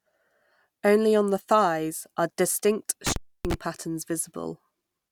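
Speech clip with an intermittent contact fault: just after "the thighs are distinct", from 3.07 to 3.54 s, a loose connection opens for about 0.29 s, cutting the signal with crackle at both edges. It shows as a near-empty gap in the waveform and a broadband vertical streak at each edge on a spectrogram.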